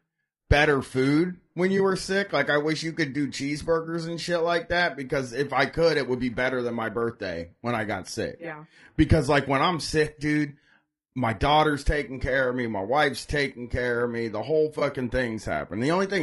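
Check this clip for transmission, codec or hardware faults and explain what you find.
Two faults can be heard: low-delay AAC compression across the whole clip, and two short AAC frame losses with concealment.

Throughout the speech there is a rough, grainy texture, with noise filling the gaps between harmonics and a thin, somewhat synthetic top band. This is most likely low-delay AAC compression of the AAC-ELD kind. Its short frames resolve pitch harmonics poorly, and the bit budget runs out, which fits a low rate around 32 kbps. Unlike a narrowband or band-limited channel, the highs are present but sound artificial rather than simply missing.

At 1.77 to 1.80 s and again at 14.79 to 14.82 s, there are brief smeared, noisy, phasey patches, each about 20 ms long, which fits a single lost frame. These are AAC frame loss with concealment: the decoder rebuilt the missing frame from the preceding spectrum instead of leaving a gap. 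That is why they sound blurred rather than like the hard silent dropout or click of an uncovered packet loss, and they are too short to fade toward silence.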